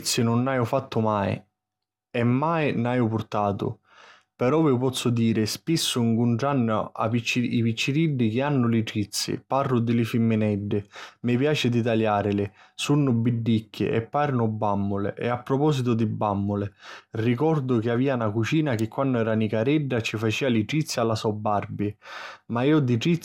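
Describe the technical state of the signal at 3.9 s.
Generation loss is present at 3.9 s, as it is across the whole speech clip. The speech sounds swirly, smeared and hollow, with transients blurred and nothing above 17.3 kHz. The character points to an MP2 stream near 128 kbit/s that was likely decoded and re-encoded around ten times. Each pass requantised the signal on a shifted frame grid, so coding noise accumulated well beyond what one encode at that rate would leave.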